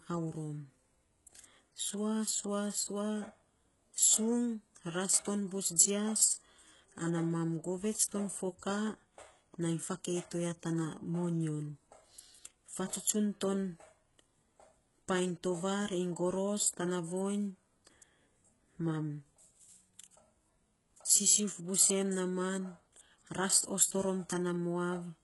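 Speech with heavy HE-AAC compression throughout: treble above 11.5 kHz is absent, and sibilants sound gritty and metallic, likely from band replication at a very low bitrate around 12 kbps.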